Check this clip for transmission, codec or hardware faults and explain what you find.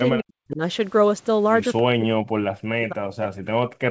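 Two stretches of the speech are sharply pushed down, most likely by speech suppressed in double talk. The band stops at 8 kHz, as expected for a wideband call codec such as G.722, and that cut-off is not a fault.

From 0.13 to 0.61 s, and again from 1.82 s to the end, the level falls by up to about 40 dB. The likely cause is an echo canceller that heard both sides at once, could not tell the talker from the loudspeaker echo, and attenuated everything. The speech turns faint and broken. The waveform shrinks abruptly in those spans, and the spectrogram fades to near-empty patches.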